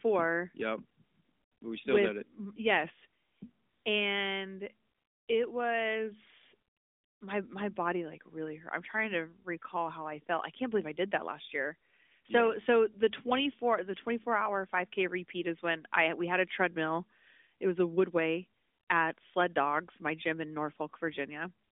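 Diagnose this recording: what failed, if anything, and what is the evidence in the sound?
Nothing has failed here: the speech comes over a narrowband mobile line that tops out around 3.7 kHz, just as an AMR-NB call at 12.2 kbps would, and no stage in the chain shows any trouble.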